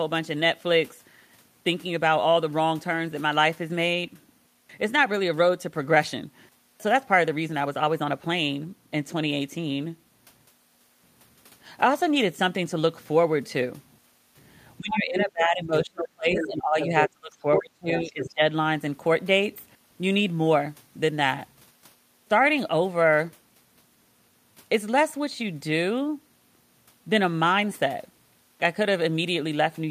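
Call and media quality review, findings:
Speech suppressed in double talk, 14.79 to 18.44 s: talker's level sags and breaks up over roughly 3 s in total, with dips as deep as about 25 dB. Likely echo canceller treating overlapping far-end speech as echo and attenuating both.

Other side's voice leaking through, short fragments at 14.97 to 15.02, 15.19 to 15.25, 16.35 to 16.47, 16.81 to 16.86, 17.57 to 17.61 and 18.21 to 18.34 s, about 5 to 10 dB under the talker. Likely residual loudspeaker echo escaping incomplete cancellation during double talk.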